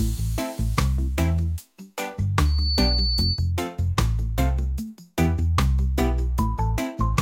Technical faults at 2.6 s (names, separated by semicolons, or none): loudspeaker feedback squeal